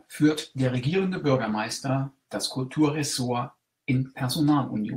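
From 0.31 s to 1.65 s the speech turns rough, watery and muffled. This is a call bitrate drop: the encoder was squeezed to far fewer bits, which fits a fall from 32 to 14 kbps. On a spectrogram the high frequencies vanish and harmonic detail smears for about 1.3 s.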